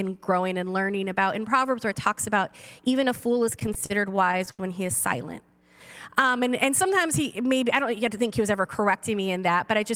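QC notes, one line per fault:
3.39 to 4.61 s, repeated stalls (stutter): The sound catches and hesitates 14 times in just over a second. Packets arrived late, so the jitter buffer kept running dry. Each time, the receiver stretched the last sound to cover the wait, about 234 ms of filler in all, roughly a fifth of the stretch. The longest hold is 80 ms. No audio is lost, but the passage drags and stutters.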